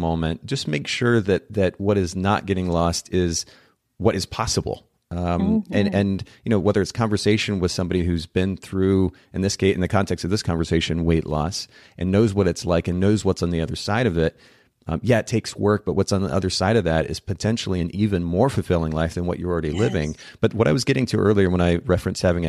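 Nothing here catches the ear as a technical fault; the speech carries along without any glitch or break worth pointing to.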